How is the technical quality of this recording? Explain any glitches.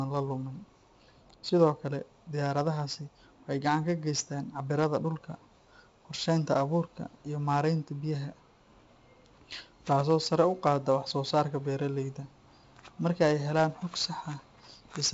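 The recording is clearly degraded by 4-bit ADPCM compression, heavy throughout. Each sample is coded as a coarse 4-bit step from a prediction, so a gritty hiss rides on louder speech and attacks distort. Nothing above 7.7 kHz, which fits a 64 kbps stream at a reduced sample rate.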